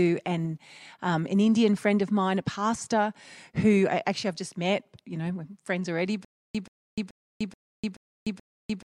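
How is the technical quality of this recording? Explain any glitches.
The recording breaks down near the end with one fault. From 6.25 s to the end, there is a stutter with silent gaps. A 130 ms fragment of speech repeats six times, with 300 ms of dead silence between repeats, likely because the stream stalled and replayed its last buffer. On a waveform or spectrogram, identical blocks recur every 430 ms, separated by flat, empty stretches.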